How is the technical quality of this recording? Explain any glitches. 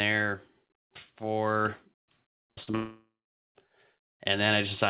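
The recording has two connected glitches, on audio band-limited to 4 kHz, which fits a G.711 telephone codec. From 2.36 to 2.75 s there is repeated packet loss (robotic sound): four gaps, the longest 56 ms, were each patched by extending the previous sound, so about 39% of that stretch turns choppy and robotic. From 2.75 to 3.50 s a long network dropout is the likely cause: the last sound is stretched into a fading buzz or hiss, then about 400 ms of silence follows before the audio resumes with that section missing.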